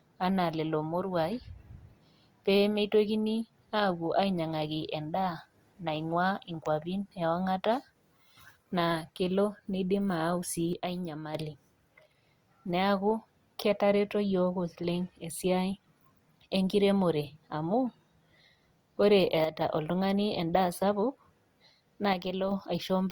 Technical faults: one channel drops out

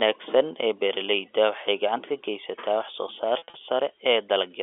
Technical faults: packet loss with pitch repetition

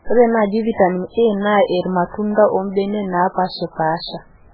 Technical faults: MP3 compression

